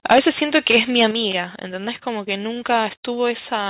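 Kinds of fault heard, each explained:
Microphone overload, 0.05 to 1.06 s: the loudest moments of the speech have a harsh, crackling edge, with waveform peaks flattened where they hit the converter's limit. The likely cause is an input level pushed about 13 dB beyond what the converter can represent, so the tops of a few percent of samples are sheared off. The squared-off peaks add dense harmonics, some of which fall within the call path's narrow telephone band, which carries nothing above 4 kHz.
Microphone volume stepped down, 1.11 s: speech and background noise both fall abruptly by 6 dB in a single jump, just after the distorted stretch ends. Because the whole signal drops at once, including the noise floor, this is a change at the input stage rather than in the talker's own loudness. It is likely the call software reacting to the preceding clipping by cutting the device's input gain in one step.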